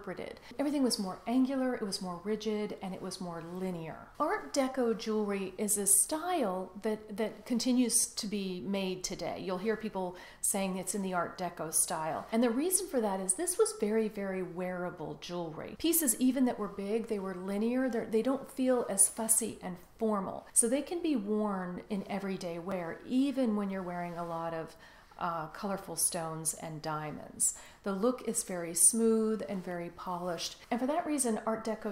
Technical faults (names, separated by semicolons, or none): repeated buffer